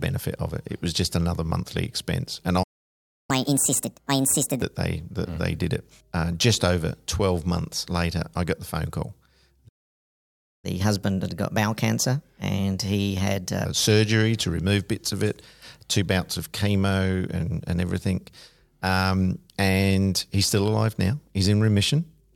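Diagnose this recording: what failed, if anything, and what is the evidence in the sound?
Playback stall at the player: the speech cuts out from 2.63 to 3.30 s and from 9.68 to 10.65 s, likely the buffer running dry or a blocked playback thread.

Catch-up at higher speed, also in playback: the backlog gets resampled faster, at 1.5x from 3.30 to 4.62 s (about seven semitones up), then 1.15x from 10.65 to 13.65 s (about two semitones up).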